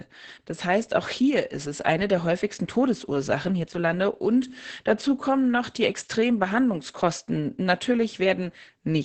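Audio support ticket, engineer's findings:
Speech muffled, hoarse and faintly robotic across the whole clip. Nothing above about 8 kHz. Opus voice compression in SILK linear-prediction mode, wideband, with the excitation coded very coarsely. Fits a setting around 10 kbps. Heavy codec damage.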